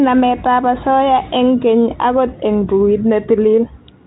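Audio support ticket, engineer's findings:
No faults found; G.726 path at 32 kbit/s normal.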